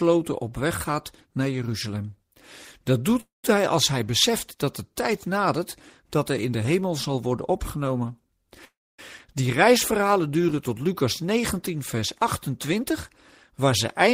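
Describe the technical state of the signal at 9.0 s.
At 9.0 s the audio is just coming out of a call audio freeze that began at 8.65 s. The sound before the stall is drawn out into a fading buzz that drops to silence for roughly a quarter of a second, and at 8.99 s the audio resumes from where it stopped, with nothing lost but everything after running about 336 ms late. The likely cause is delayed packets draining the jitter buffer.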